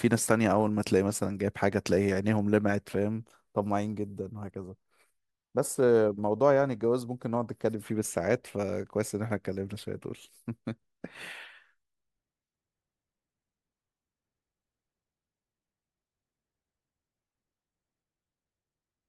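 At 11.44 to 11.47 s the speech is interrupted by a short, quiet glitch of stray energy lasting about 22 ms and peaking around -40 dBFS. This is a corrupt frame decoded: the duration fits roughly one damaged compressed frame whose bits were flipped, and the decoder played it regardless, misreading gains or codes and placing energy at frequencies where none belonged until the next clean frame.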